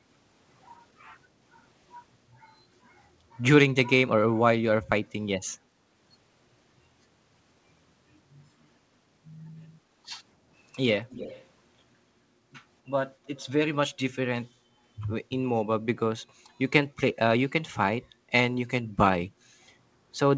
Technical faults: echo leak; background gated by the echo canceller

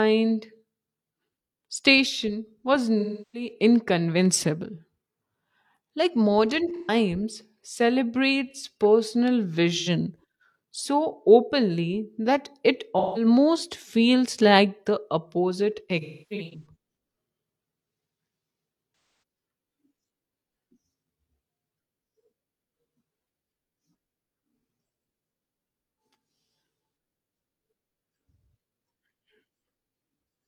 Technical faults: AAC frame loss with concealment

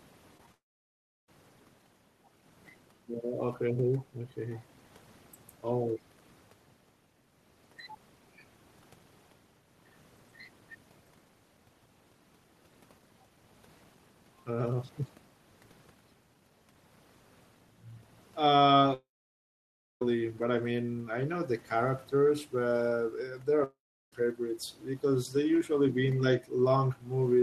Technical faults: short concealed packet loss; long network dropout

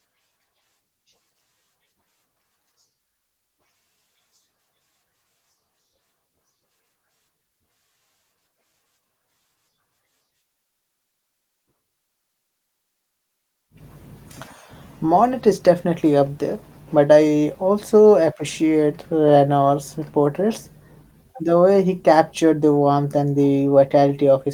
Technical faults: none

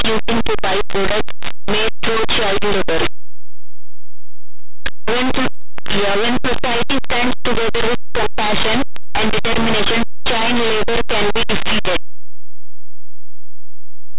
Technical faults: linear audio read as companded

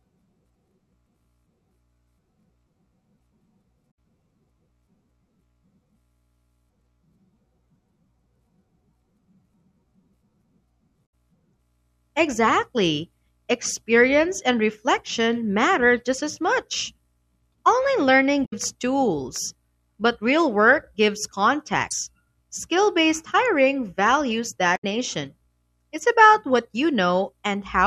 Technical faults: damaged data in a compressed stream

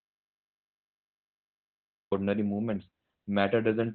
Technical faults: Opus voice compression; audio dropout to silence

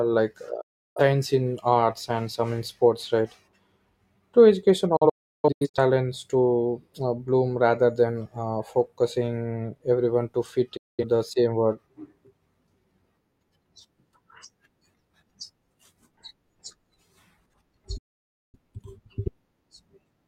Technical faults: digital broadcast dropout

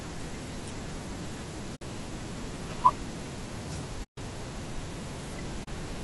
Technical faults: low-delay AAC compression; AAC frame loss with muting

